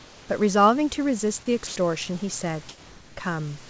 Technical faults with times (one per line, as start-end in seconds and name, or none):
0.00-0.29 comfort noise in place of the background
1.67-1.76 sound dropped by the voice detector